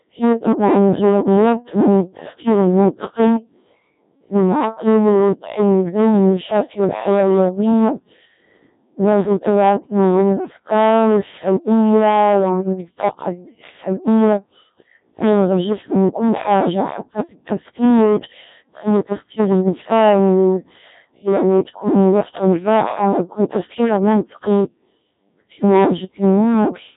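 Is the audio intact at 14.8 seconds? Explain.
No. At 14.8 seconds the speech suffers hard clipping that runs through the whole clip. It is overdriven by about 12 dB, so roughly 15 percent of the samples hit the rail and are cut flat. The result is a harsh fuzz on every loud syllable. The waveform shows squared-off plateaus, and the spectrogram shows harmonic smear far above the voice.

The same moment also carries Codec 2 vocoder damage, heavy at a rate that sounds like about 1.3 kbit/s. Only pitch, voicing, energy and a coarse envelope survive, and the voice is rebuilt from sine waves. It sounds robotic and buzzy. The spectrogram shows blurred, simplified harmonics, and the waveform no longer follows the original shape.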